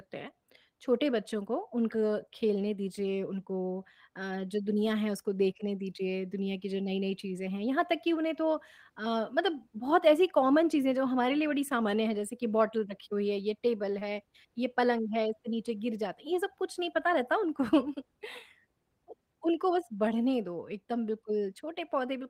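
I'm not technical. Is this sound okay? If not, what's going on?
No. There is one small glitch, at about 13.99 to 14.03 seconds. It is a short concealed packet loss. A tiny piece of the call, about 20 milliseconds, arrived too late to be played. The receiving end covered the gap by stretching the sound it had just played, for about 16 milliseconds, then eased back into the real audio. You may hear a quick smear or wobble there. A very short sound could be lost.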